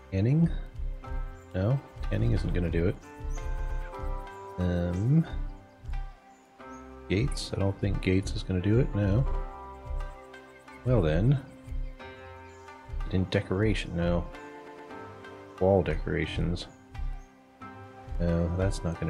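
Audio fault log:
3.58 to 3.81 s, 9.30 to 9.37 s, 14.66 to 14.90 s and 16.30 to 16.34 s, repeated frames: a short block of compressed audio is decoded again, so the sound stutters. A 116 ms block repeats twice at 3.58 s and at 14.66 s, a 70 ms block once at 9.30 s and a 23 ms block twice at 16.30 s, adding 0.58 s in all.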